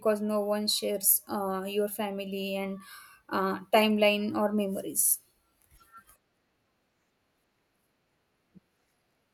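Nothing in the speech recording stood out as a technical problem on listening.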